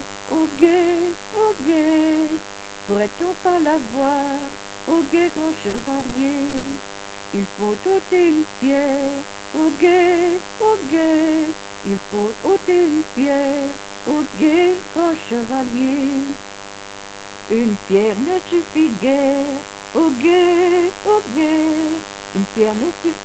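A mains buzz runs through the whole clip. It sits on a 50 Hz base, with sharp harmonics climbing well up the spectrum. It sits about 15 dB below the wanted signal, so it is plainly audible. It sounds steady and raspy, not like a smooth hum. Switching spikes from a dimmer, a rectifier or poor shielding get into the signal twice per mains cycle. That spiky shape is what makes the buzz harsh.

From 5.69 to 6.13 s there is repeated packet loss, and it gives a robotic sound. Within that stretch, four separate holes open up, the longest about 40 ms. Together they account for 100 ms, roughly a quarter of the span. Each hole is patched by extending the last bit of sound. Then the next hole arrives. The result is choppy and robotic, with small pieces missing.

At 6.49 to 6.55 s comes a short concealed packet loss of 40 ms. The receiver fills the hole by stretching what came just before. It then blends back into the real audio. 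This is heard as a brief smear or wobble rather than a clean cut.

Straight after, from 6.57 to 6.65 s, a burst of packet loss removes 60 ms. The receiver carries the last sound forward and fades it as the gap runs on. That leaves a held buzz or a dying hiss. The audio then resumes further along. The 60 ms in between is simply gone.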